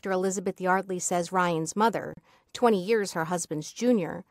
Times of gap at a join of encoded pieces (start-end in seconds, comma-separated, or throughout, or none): 2.13-2.17